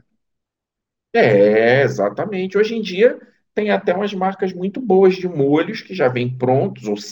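Right through the speech there's imaging from linear upsampling. The top end sounds dulled, with a faint metallic shimmer on sibilants. That points to a roughly 22 kHz source joined up with straight lines to reach 48 kHz, leaving a mirrored copy between 11.03 and 22.05 kHz, roughly 45 dB down.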